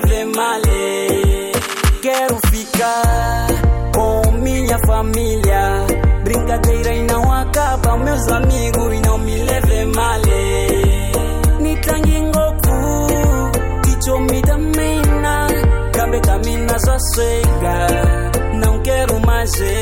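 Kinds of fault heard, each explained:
No kinds of fault are heard in this clip.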